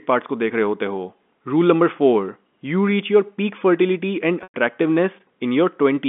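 At 4.43 s the speech briefly turns into a held, buzzy tone that thins away and drops to a gap of silence, and the speech picks up again at 4.54 s through a short cross-fade. This is packet loss with pitch repetition. About 110 ms of audio went missing, roughly the length of eleven 10 ms packets. The receiver covered the hole by looping the last pitch period and fading it out, and the loss outlasted that fade. All of this sits inside the narrow 200 Hz to 3.5 kHz band of the G.711 telephone coding.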